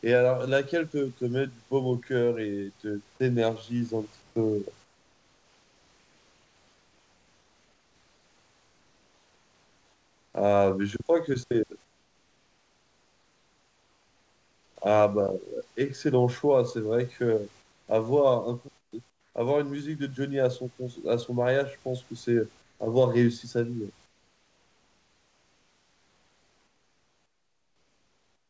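In the pauses of this speech, the room background gets swapped for comfort noise at 4.22–4.36, 4.84–10.34, 11.84–14.76, 17.62–17.88, 18.78–18.92, 19.10–19.34, 22.62–22.80 and 24.06 s to the end. The textured room hiss turns flat and featureless, and drops by about 2 to 11 dB. That's likely discontinuous transmission, with the receiver synthesising noise while the sender stays quiet. The audio tops out around 8 kHz throughout, as you'd expect from a 64 kbps G.722 call.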